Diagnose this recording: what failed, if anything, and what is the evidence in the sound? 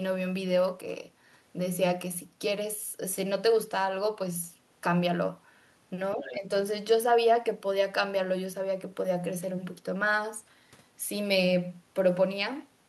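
Call processing stage. From 6.15 to 6.51 s the talker's level sags by around 5 dB in patches totalling roughly a fifth of a second. This is speech suppressed in double talk, likely the echo canceller attenuating the near end while the far side was also active.

Call processing stage. Between 6.19 and 6.36 s a second, fainter voice sits about 15 dB under the talker. This is the other side's voice leaking through, likely loudspeaker echo that the echo canceller failed to fully subtract from the microphone signal.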